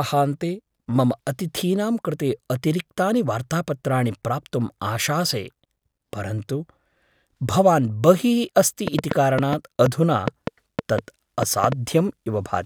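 From 8.88 to 11.73 s, a train of clicks, around fifteen irregular pops at about 4.2 per second, rises well above the speech, likely from equipment interference.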